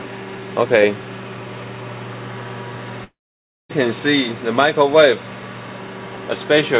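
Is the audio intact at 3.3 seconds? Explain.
No. A long network dropout runs from 3.04 to 3.71 s, so 3.3 s falls inside it. Audio was likely lost in transit for about 0.66 s. The receiver stretched the last sound briefly into a fading buzz, then left near-silence for most of the gap, about 0.57 s. When sound resumes at 3.71 s, the lost portion is gone. The call's G.711 band limit, nothing above 4 kHz, still applies on either side.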